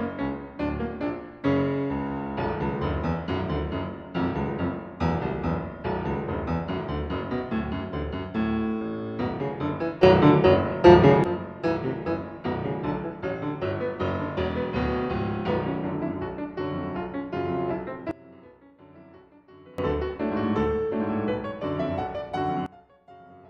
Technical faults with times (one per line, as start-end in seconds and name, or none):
10.03-11.24 sudden gain jump
18.11-19.78 sudden gain jump
22.66-23.50 sudden gain jump